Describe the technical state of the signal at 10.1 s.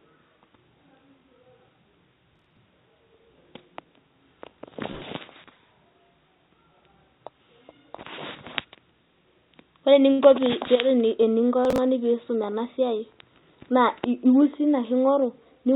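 Around 10.1 s there are two faults back to back. First comes a jitter buffer speed-up from 9.87 to 10.10 s. The receiver had more audio queued than it wanted, so it cut out short pitch-period slices, roughly 40 ms in all. The sound plays at about 113% speed with the pitch unchanged, so this stretch comes across as rushed.

Right after it, from 10.12 to 10.21 s, comes a short stall from a late packet. The buffer ran dry and the receiver stretched the last sound by 66 ms while it waited. Nothing is lost, and playback resumes where it stopped. The held sound drags a little, with a faint buzz or dip. It lies inside the narrowband call path, which stops at 4 kHz and fits G.711 A-law at 64 kbps.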